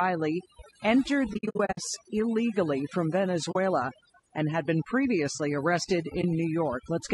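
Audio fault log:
throughout: overdone noise removal. The background drops to near silence scattered with twinkling specks. The reduction is pulling individual frequency bands down hard whenever they sit close to its noise estimate, and the quieter parts of the voice fall below that line and vanish with the noise. Unlike codec damage, the artefacts flicker in the gaps and at soft word endings rather than coating the harmonics.
throughout: low-delay AAC compression. The voice is rough and grainy, with noise filling the spaces between pitch harmonics and a top band that sounds lowered and synthetic. This is likely AAC-ELD at a bitrate that sounds close to 32 kbps. Its short frames resolve the harmonics poorly and spend bits inefficiently, so there is too little left for the fine structure. Unlike the noise removal, this grain stays on the voice itself even when it is loud.
1.33–1.79 s, 3.51–3.56 s, 6.21–6.24 s: AAC frame loss with muting. 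The sound fades out and back in, leaving soft-edged holes and, at 6.21 s, a brief dip. The first stretch is broken up: about 280 ms goes missing in pieces spread over 440 ms, and no single gap is longer than a tenth of a second. The later gaps last 40 ms and 20 ms, which fits frames of about 20 ms. The decoder zeroed each lost frame's spectrum, and the overlapping windows smooth the edges. Hard dropouts would click instead.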